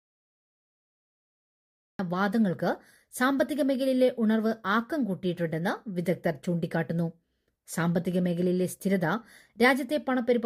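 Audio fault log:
0.00–1.99 s, cut-off start: capture or streaming began late, so the file holds nothing but digital silence until 1.99 s, where the audio jumps in partway through a sound that was already under way. Because the opening was never recorded, there is no natural attack or gradual rise in level. The sound is abruptly switched on from dead silence, and the listener hears it beginning mid-event rather than from its true start.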